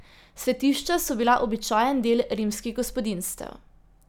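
Nothing in this speech recording stands out as a technical fault, so there's no moment here that needs pointing out.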